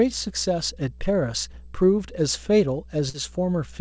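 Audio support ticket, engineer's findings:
Mains hum, throughout: steady 60 Hz tone roughly 20 dB under the speech. Probable ground loop or nearby transformer leaking line power into the signal chain.

Short concealed packet loss, at 1.52–1.55 s and 3.09–3.16 s: brief smears where the decoder extended the previous sound to cover gaps of about 20 and 40 ms.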